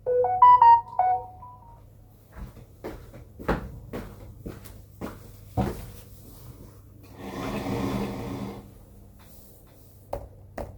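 From 7.57 s to the end, a doubled audio track appears: a second, full-band copy trails about half a second behind, roughly 5 dB quieter, likely from a slower capture path. Unlike an echo, it starts abruptly and carries no decay or room colour.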